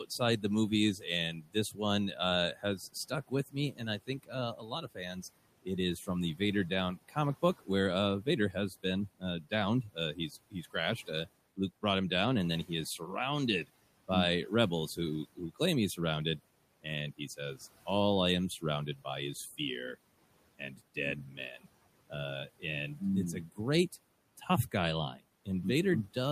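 Speech clip with speech cut by the noise suppressor in five stretches: 0.05–7.69 s (about 19 dB down, roughly two seconds swallowed), 8.22–11.83 s before "him down and then", 13.64–17.87 s, 18.61–19.6 s after "I am", and 20.58–25.47 s. The suppressor mistook quieter speech for the room noise about 21 dB below, dipping it roughly 12–19 dB.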